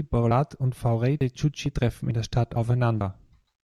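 It's a speech clip with a regular skipping problem: small jumps at 0.31, 0.76, 1.21, 1.66, 2.11, 2.56 and 3.01 s, one every 0.45 s. Each is a jump of something like 50 ms, butted straight together with no gap. That steady spacing is the giveaway for audio missing between chunks. The likely cause is a recorder working in half-second chunks and dropping a sliver at each handover.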